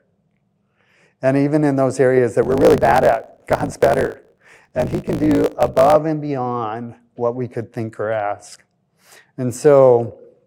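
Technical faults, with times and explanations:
2.41 to 5.96 s, block size mismatch (truncated): here the speech picks up a steady buzz at about 54 Hz and hurries along roughly 1.16 times faster, yet the timbre stays put. One stage is handing over bigger blocks than the next one reads, which fits 1024-sample writes, so the tail of every block gets dropped. Each chop lands once per block, hence the buzz, and losing those slices squeezes the timing.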